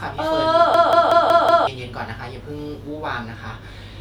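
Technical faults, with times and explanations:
0.74–1.67 s, system hang loop: a machine-gun stutter as one 0.19 s fragment of speech repeats exactly five times at about 5.4 Hz, which fits an 8192-sample buffer. The system froze while the audio hardware kept replaying its ring buffer, losing about a second of audio.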